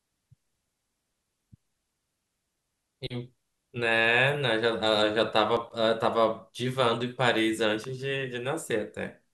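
A speech recording with two brief faults. At 5.57 s an overlap between stream segments trims about 10 ms of sound, heard as a tiny skip; the waveform shows a sudden discontinuity there. At 7.84 s a sharp snap sits on top of the speech, most likely an electrical switching spike, appearing as a thin vertical line spanning all frequencies on a spectrogram.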